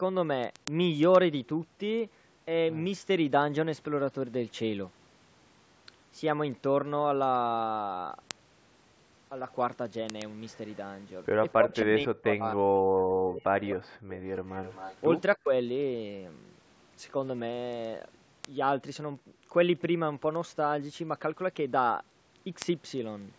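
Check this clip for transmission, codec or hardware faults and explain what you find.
Three faults are present: clock-slip ticks throughout, and two call-path problems between 11.56 and 15.51 s.

Word clock ticks run from 0.2 s to 23.34 s, roughly every 0.1 s, about 200 in all. The receiving device's clock drifts against the sender's, by something like 200 ppm. At each slip one sample is dropped or repeated, giving sharp ticks of uneven strength at a steady rate.

Speech suppressed in double talk affects 11.56 to 14.22 s, with drops of around 40 dB, and 15.36 to 15.51 s, about 35 dB deep. The sound dips and breaks up. The likely cause is an echo canceller that turned the talker down while both sides spoke.

Echo leak appears at 13.70 to 13.75 s and 14.48 to 15.0 s. It is a faint delayed copy, 258 ms behind, about 20 dB and then about 15 dB below the speech. The likely cause is loudspeaker pickup that the loudspeaker side's echo canceller failed to remove.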